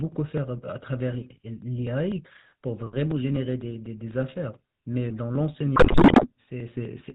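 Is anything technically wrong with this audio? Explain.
Yes, there are two problems. Throughout, the speech carries the sound of the GSM full-rate codec, the old 13 kbps-style mobile coder. It models the vocal tract as a filter and excites it with a sparse train of regular pulses, keeping only a third of the excitation samples, so fine detail gets rebuilt crudely. Nothing comes through above 4 kHz, and the damage is plainly audible as a buzzy, gravelly roughness over the whole clip.

Then from about 5.76 to 6.29 s there's a burst of GSM bit errors, the kind you get when a weak radio link lets a lot of corrupted bits through to the decoder. When the filter, pitch or gain parameters get hit, a frame comes out with a warped spectrum or a sudden level jump. Across that half-second it sounds like a dense error run, with the speech breaking up into squawks, pops and gargling before it settles back.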